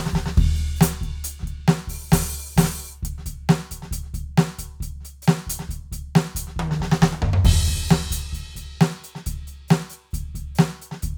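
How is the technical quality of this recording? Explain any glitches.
The technical quality of this music recording is sound, with no glitches to explain.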